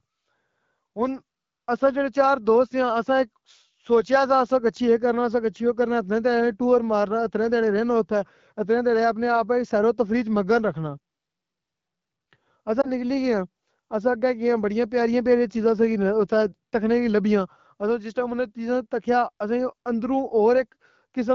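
At 12.81 to 12.87 s there is a lost AMR speech frame: a radio error corrupted one coded frame, so the decoder rebuilt it from the last good pitch and vocal-tract settings at lowered gain. It sounds like a brief dip or warble, which fits a single 20 ms frame. Unlike a hard dropout or clipped gap, the sound never goes silent and never clicks. It bridges the gap, the voice comes back weak or rough for a moment, and then it resumes in the light, clean character of the AMR wideband (HD Voice) codec.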